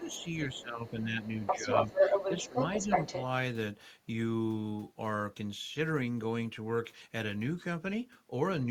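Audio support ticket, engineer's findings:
Speech suppressed in double talk: talker dips about 5 to 10 dB at 0.00–0.25 s, 0.54–1.21 s, 1.39–1.70 s, 2.49–2.87 s; likely echo canceller ducking near-end while far end talks.

Other side's voice leaking through: faint second voice 0.04–0.62 s, then louder than talker 1.23–3.22 s; likely residual loudspeaker echo left uncancelled in mic path.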